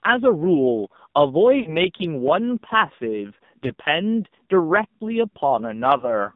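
Throughout, the speech has passed through the AMR narrowband mobile codec at a low rate, which points to one of the lower AMR modes around 6 kbps. The channel holds only about 150 Hz to 3.7 kHz, so everything above is missing. With so few bits to rebuild the vocal tract and pulse excitation, the coding damage is heavy: the voice sounds buzzy and synthetic rather than natural.

Lost AMR speech frames then break in three times. From 1.60 to 1.77 s, radio errors corrupted a stretch of roughly 60 ms, and the decoder filled it by repeating its last good pitch and filter settings at falling gain. The sound smears and sags before recovering rough. Shorter losses of about 40 ms at 3.66 to 3.73 s and 5.98 to 6.08 s each briefly draw the sound out as its level falls.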